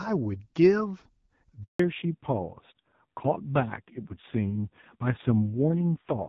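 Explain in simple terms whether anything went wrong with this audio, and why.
At 1.64 seconds the call was passed from one network to another, and for about 160 milliseconds, until 1.79 seconds, no speech data got through. This is a handover gap. You hear the speech fade out very quickly and then a short stretch of silence before the new connection picks up. Whatever was said during that moment is simply gone and can't be recovered.

Right after the switch, at 1.79 seconds, the call also dropped from HD Voice to an older, lower-quality phone codec, and it stays there to the end of the clip. This is a fallback to narrowband. Up to that point the HD Voice codec carried the speech with good clarity. From then on, everything above 4 kHz is cut away, so the speech sounds duller, more muffled and rougher, like an old landline call.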